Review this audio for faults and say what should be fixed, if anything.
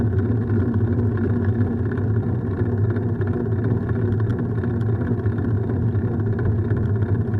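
Nothing needs fixing, as the signal runs without any audible technical fault at any point.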